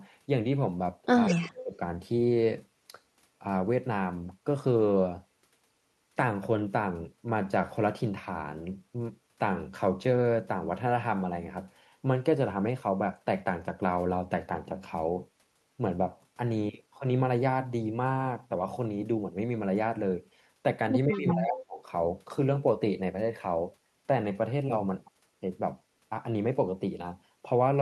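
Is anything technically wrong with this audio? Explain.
Yes, the call path is mishandling its loudspeaker echo at two moments in this speech clip.

From 1.26 to 1.51 s, and again from 21.15 to 21.31 s, there is an echo leak. This is likely a far-end echo canceller letting part of its loudspeaker pickup through and back down the line. A faint copy of the speech comes back about 190 ms late, roughly 15 dB below the direct sound.

From 1.3 to 1.79 s and from 21.06 to 21.81 s, there is speech suppressed in double talk. This likely comes from the canceller mistaking overlapping talk for echo and clamping the line. The speech dips hard, by roughly 25 dB in the first spot and 20 dB in the second, for about half a second and about 0.7 s.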